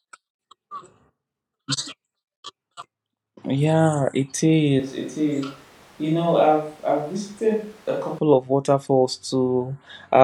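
From 4.80 to 8.18 s the speech turns roomy, hollow and thin, a few decibels quieter, with more background noise, likely a switch to a distant microphone.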